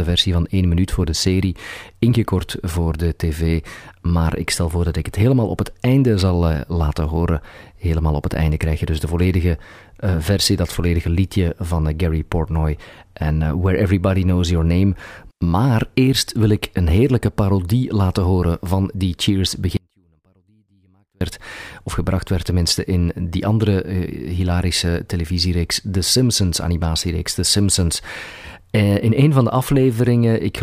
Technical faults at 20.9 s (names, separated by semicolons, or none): audio dropout to a faint residue